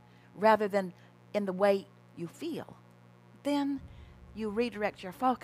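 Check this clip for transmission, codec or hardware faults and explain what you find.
A mains buzz runs through the whole clip, built on 60 Hz. The harmonics stack up well into the kilohertz range, which points to sharp switching spikes from something like a dimmer or a rectifier, or to an unshielded path picking up interference. Those spikes arrive twice in each mains cycle. The result is a steady, raspy buzz rather than a smooth hum. It sits roughly 30 dB below the signal.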